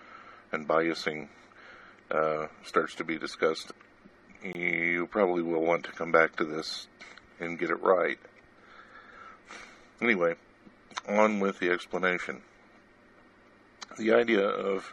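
At 1.22 s and from 4.53 to 4.55 s, blocks of digital silence, about 5 ms then 20 ms of silence, cut in abruptly, heard as a tick and a short hole.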